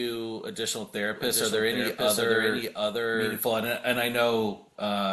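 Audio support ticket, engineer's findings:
Doubled audio track, 1.16 to 3.40 s: full-band copy about 0.7 s behind at roughly equal level, likely a second capture path. Waveform shows duplicated envelopes, abrupt onset and cutoff.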